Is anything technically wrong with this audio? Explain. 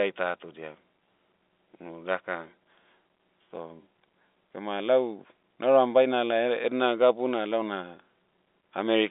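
No, nothing is technically wrong with this audio.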